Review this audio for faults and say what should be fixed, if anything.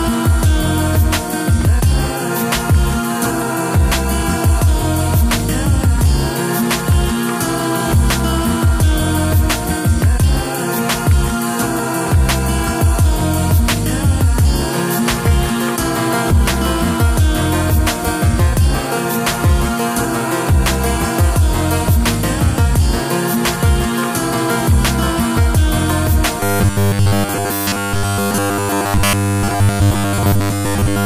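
From 26.40 s to 31.05 s the sound collapses into a rigid, metallic buzz pitched at 100 Hz, which is robotic sound from repeated short buffers. The likely cause is audio arriving too seldom, so essentially the whole stretch is filled by looping roughly 10 ms fragments. Prevent it with a larger playback buffer so fresh audio arrives before the output runs dry.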